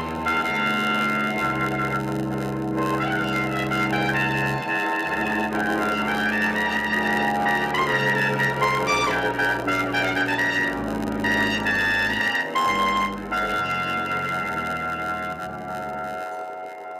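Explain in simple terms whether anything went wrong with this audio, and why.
A steady buzz of about 92 Hz runs through the whole clip, and everything plays about 8% slow. That is a block size mismatch (padded): each audio chunk arrives short and the missing part is filled with silence. Unlike simply playing too slowly, the timbre stays the same.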